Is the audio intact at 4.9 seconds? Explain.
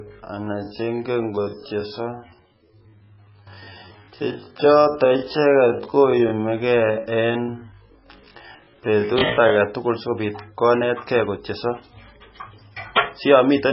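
No. At 4.9 s the speech sits inside a time-stretched section running from 0.0 to 9.6 s, ending just before "sikobit konet". It is slowed to about 0.55x with pitch held, likely by repeating short pieces, so it drags. Heavy MP3 compression also affects the whole clip, likely at a very low bitrate near 16 kbps. The sound turns watery and swirly as weak frequency lines drop in and out.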